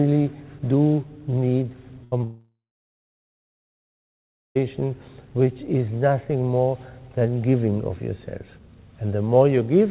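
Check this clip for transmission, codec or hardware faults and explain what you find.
Three related transmission faults cluster between 2.04 and 4.57 s. They are all packet losses on the call path, which carries nothing above 4 kHz, consistent with a G.711 narrowband codec.

Burst of packet loss, 2.04 to 2.14 s: about 80 ms of consecutive packets failed to arrive in time. The receiver extended the last sound and faded it down across the gap, so a brief held, dimming fragment replaces the missing audio before playback jumps ahead.

Short concealed packet loss, 2.18 to 2.22 s: roughly 20 ms of data missed the decoder. The receiver synthesised a stand-in from the preceding sound and crossfaded back into real audio, leaving a quick smear or wobble where a short sound may drop out.

Long network dropout, 2.24 to 4.57 s: about 2.3 s of audio is missing. A concealment tail carries the last sound briefly and fades, then about 2 s of silence follows. 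The sound resumes at 4.57 s, further along, most likely after a network outage that interrupted packet delivery entirely.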